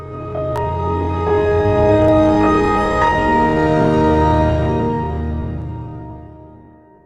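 From 0.33 s to 5.62 s, about four short clicks recur every 1.76 s, pointing to clock drift buffer slips. Two unsynchronised clocks, likely about 100 ppm apart, force a few samples to be skipped or repeated. Unlike random dropouts, the clicks keep a steady interval.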